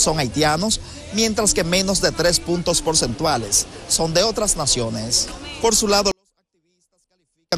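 From 6.12 to 7.52 s the audio suddenly falls about 48 dB yet stays clean, a 24-bit alignment error: low-byte 24-bit samples read as 32-bit, unlike a fade or truncation noise.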